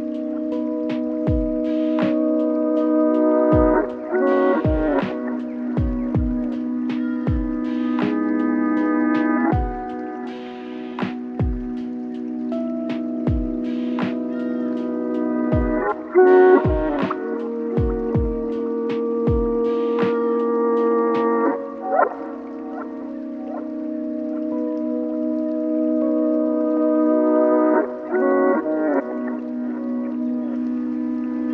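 The audio holds steady throughout, with no dropouts, level jumps or timing disturbances anywhere in the signal.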